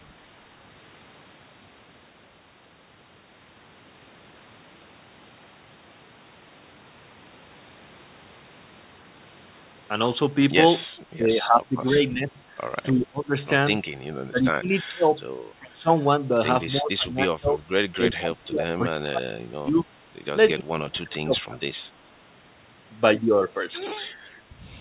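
The speech dips repeatedly, sinking by roughly 15 to 30 dB, deepest near the end, at 11.16–12.39, 12.93–13.34, 14.29–15.13, 15.58–15.9, 16.71–17.63, 17.95–19.88 and 20.54–21.66 s. This is likely speech suppressed in double talk, with the echo canceller muting its own talker while the far end speaks.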